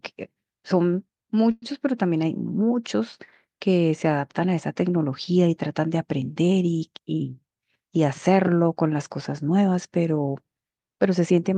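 At 1.51 s the speech stalls into a brief fading buzz or hiss until 1.64 s, then resumes intact. This call audio freeze likely came from delayed packets emptying the jitter buffer.

From 6.88 to 7.77 s a jitter buffer speed-up plays speech at 111% speed, same pitch. Trimming about a tenth of a second of pitch periods makes it sound hurried.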